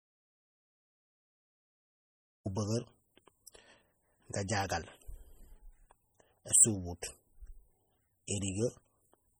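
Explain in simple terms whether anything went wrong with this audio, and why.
The clip opens in dead silence that lasts until about 2.46 s, with not even faint background hiss, before the speech comes in. This is an audio dropout to silence: the input was likely lost before the recording began, so the recorder wrote silence.

Throughout the clip the speech carries the lingering artefacts of heavy compression. This is low-bitrate audio saved at a high bitrate: an MP3 was likely squeezed hard first and then resaved at better quality, which kept the damage without repairing it.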